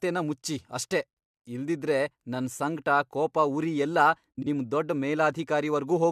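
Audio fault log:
4.37–4.47 s, frames out of order: Right after "ಸಂಕ್ಟ ಕೋಪ ಉರಿ ಎಲ್ಲ", two adjacent blocks of about 43 ms play swapped, which fits pairs of roughly 21 ms frames. The speech flutters and garbles. No time goes missing before "ನಿಮ್ ದೊಡ್ಡ್".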